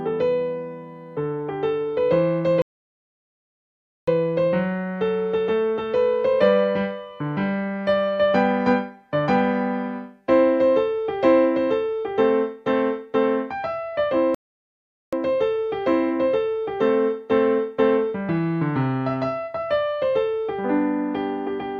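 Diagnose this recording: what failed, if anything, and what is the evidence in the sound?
A playback stall occurred at the playback stage, likely because the player's buffer ran dry or its thread was blocked, so output went silent until it recovered. The sound cuts off mid-flow from 2.62 to 4.08 s (1.46 s) and from 14.35 to 15.13 s (0.78 s) before resuming.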